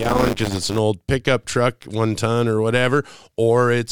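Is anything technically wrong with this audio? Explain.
Yes. Buffer tearing runs from 0.0 to 0.8 s of the speech. The software filling the ring buffer and the hardware reading from it have drifted out of step, so their positions cross within every period. A small slice of each buffer, around a seventh, still holds audio from one lap back, roughly 20 ms old, joined abruptly on both sides. Those joins repeat at 100 Hz, which fits a 10 ms period, and are heard as a rattling, robotic buzz riding on the speech.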